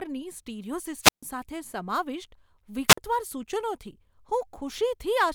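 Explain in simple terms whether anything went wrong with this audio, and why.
The speech cuts out twice, at 1.01 to 1.23 s and 2.88 to 2.98 s. This is wireless microphone squelch dropout. The radio signal weakened, so the receiver muted it briefly.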